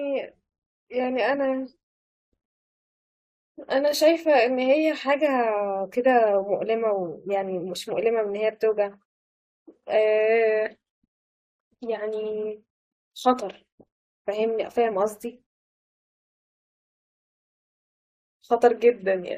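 At 16.13 s the speech halts in a rebuffering stall: playback drained its downloaded audio and waited for more data before continuing at 17.94 s. The sound drops to dead silence for about 1.8 s, then picks up exactly where it left off, with nothing skipped, just time inserted. On a waveform this is a flat, near-silent gap; on a spectrogram, a dark vertical band.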